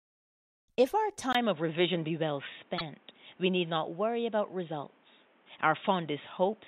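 At 1.33 s the speech drops out for about 20 ms, then continues dull and boxy through the end at a similar level, with nothing above 3.8 kHz and a new, faint background noise floor about 35 dB below the speech. This points to an input switched to a poorer device, likely a narrowband headset or microphone.

From 2.77 to 2.82 s there are repeated frames. A 48 ms block of compressed audio is played once more, which fits a pair of short codec frames. It is heard as a brief stutter and adds 48 ms to the clip.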